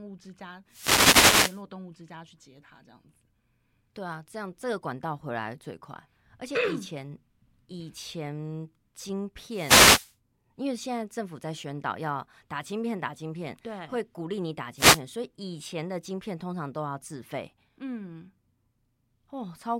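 Wireless microphone noise hits occur at 0.68 to 1.63 s, 9.47 to 10.15 s and 14.75 to 15.01 s. Each time, the analogue FM radio link fades as reflected signals cancel, so receiver noise rises over the speech and is heard as a brief swish or burst of static.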